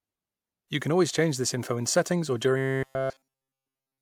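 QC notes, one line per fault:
2.58–4.02 s, robotic sound from repeated short buffers: after "info in settings or", the speech becomes a rigid metallic buzz near 133 Hz. Every segment is likely a repeated buffer of about 7.5 ms.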